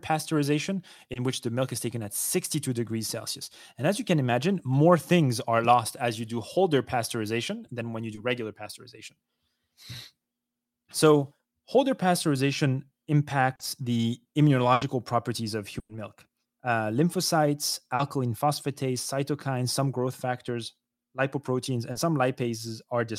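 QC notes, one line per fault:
1.13, 8.15, 13.55, 17.95 and 21.91 s: short concealed packet loss. Each time 20 to 40 ms of the call's audio arrived too late, and the receiver extended the preceding sound to bridge the hole before blending back, heard as a brief smear or wobble in the speech.
14.73 to 14.83 and 15.79 to 15.91 s: burst of packet loss. Runs of 80 and 100 ms were lost, and the receiver continued the last sound while fading it, giving a held buzz or dying hiss. The second burst decays to about 30 ms of silence before speech resumes, with the missing stretch skipped.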